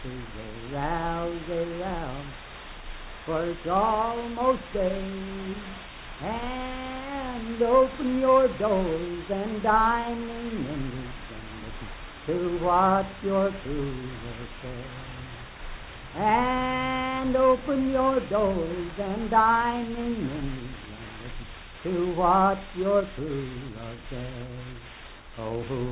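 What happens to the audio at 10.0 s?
Nothing goes wrong at 10.0 s: the audio plays through that moment intact, with no dropout, click, distortion or other fault.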